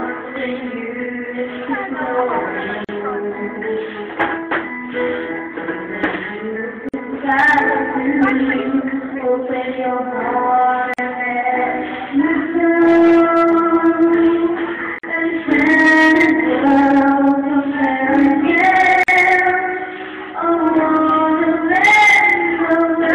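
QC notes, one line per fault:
2.85, 6.89, 10.94, 14.99 and 19.03 s, gap at a join of encoded pieces: untrimmed encoder delay and padding between separately encoded pieces leave 42 to 49 ms silences every 4 s, smeared at the edges, then the sound resumes.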